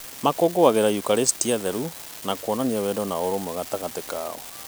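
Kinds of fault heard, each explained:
Unreliable data bit: one marginal bit in the sample data flips at random, adding equal-sized spikes of about -23 dBFS throughout the speech, heard as a constant fizzy crackle even in pauses; the waveform shows scattered identical spikes, the spectrogram a broadband speckled haze.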